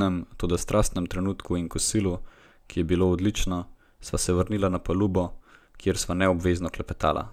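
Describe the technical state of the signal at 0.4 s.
At 0.4 s the speech signal is intact, with no audible fault at that moment.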